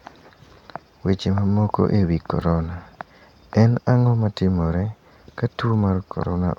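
At 2.42 s a gap between stream segments opens: the time stamps of two adjoining segments fail to meet, so the player inserts about 3.2 ms of silence. Unlike a dropout, no audio goes missing; the speech simply halts for a sharp-edged instant, then continues intact.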